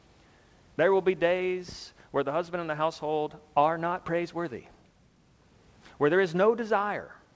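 There are no technical faults to describe in this speech clip.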